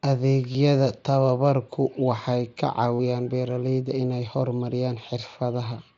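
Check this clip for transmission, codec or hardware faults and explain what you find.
Concealed Bluetooth headset packet loss occurs twice in this speech clip, at 0.52 to 0.55 s (about 22 ms) and 2.95 to 2.99 s (45 ms), the lengths fitting runs of roughly three and six headset packets. When packets drop, the phone fills the gap by repeating the best-matching recent stretch of waveform. Each gap holds a brief buzzy tone at full level, with a slight warble as real audio resumes. The mSBC codec carrying the audio adds only light grain.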